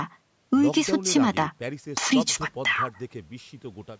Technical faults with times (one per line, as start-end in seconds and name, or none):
none